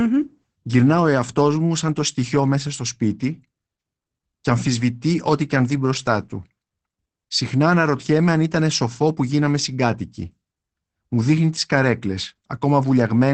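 Opus voice compression is audible throughout the speech. Nothing survives above 8.6 kHz. The SILK coder leaves it plainly muffled and hoarse, which fits about 12 kbps.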